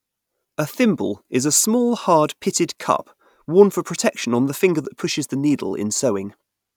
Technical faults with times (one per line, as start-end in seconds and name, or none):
none